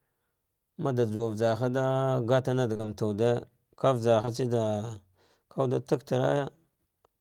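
At 1.15 s a short concealed packet loss leaves about 40 ms of speech missing. The receiver bridges it by extending the preceding sound, heard as a brief smear. On a spectrogram, the patch runs flat and unchanging, then rejoins the real signal.

From 2.73 to 2.89 s, repeated packet loss produces a choppy, robotic stretch. Several holes of up to 20 ms each, about half the span, are filled one after another. The spectrogram shows stepped, frozen segments.

At 4.21 s and again at 4.25 s, two back-to-back short concealed packet losses each replace 20 ms with continued sound, together giving a brief wobble. On a spectrogram they appear as a brief flattened patch with soft edges where the audio blends back.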